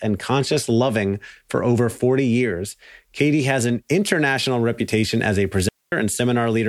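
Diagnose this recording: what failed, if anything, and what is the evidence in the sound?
A digital wireless dropout is the failure, at the radio link between transmitter and receiver. Right after "international reputation as a", the speech vanishes from 5.69 s to 5.92 s, a gap of about 236 ms, with no crackle or noise burst on either side. The receiver lost too much of the data stream, so it muted with a very quick fade instead of passing garbage. On a waveform this is a flat, near-silent band; on a spectrogram, a clean dark vertical strip.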